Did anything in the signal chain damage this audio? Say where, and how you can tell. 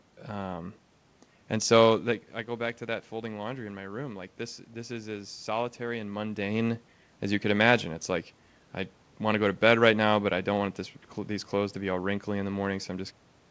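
No, nothing in the chain damages this speech; the band stopping at 8 kHz fits a G.722 call path at 64 kbps, the level shifts near 2 s and 6 s are the talker moving relative to the microphone, and the ending is a deliberate smooth fade-out.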